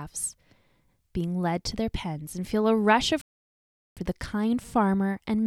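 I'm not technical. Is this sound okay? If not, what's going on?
No. Just after the speaker says "and feel a rush", the speech cuts out completely at 3.21 s and stays silent until 3.97 s, a gap of about three quarters of a second, before the sound comes back. This is a playback stall. It is likely that the player ran short of audio data, or was briefly held up doing something else, so it had nothing to send out until it caught up again.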